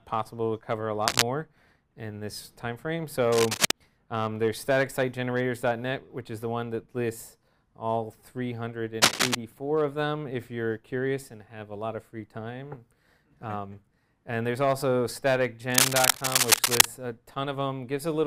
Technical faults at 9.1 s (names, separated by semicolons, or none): cable scratch noise